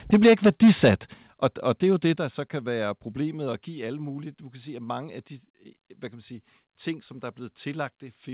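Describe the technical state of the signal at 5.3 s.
At 5.3 s the signal is intact, with no fault present; the speech sits in the narrow call band of a normal telephone-style path, with nothing above 4 kHz, which fits a G.711 mu-law connection.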